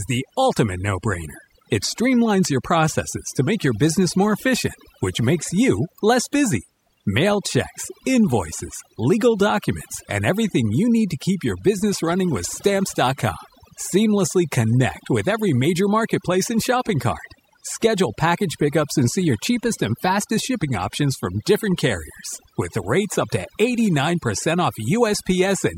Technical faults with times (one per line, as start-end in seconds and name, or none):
0.00-25.78 overdone noise removal